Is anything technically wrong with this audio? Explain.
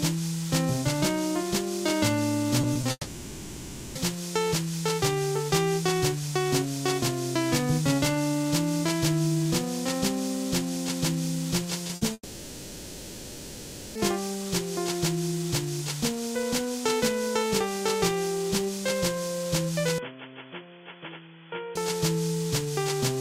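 Yes. Short concealed packet loss occurs at 2.61, 2.73, 2.81 and 11.87 s: 20 ms stretches arrived too late, so the receiver extrapolated them, leaving brief smears or wobbles.

A burst of packet loss from 11.95 to 12.03 s removed 60 ms. Concealment holds the last sound as a buzz or hiss that fades before the audio resumes.

From 2.91 to 3.97 s and 12.13 to 13.97 s, a long network dropout is the likely cause. About one and nearly two seconds are missing, filled by decaying continuation, then the audio jumps ahead.

Between 19.98 and 21.75 s, the likely cause is the input switching to a poorer device. Nothing above 3.4 kHz passes, the level falls by roughly 10 dB, and the sound turns dull and boxy with a faint new noise floor.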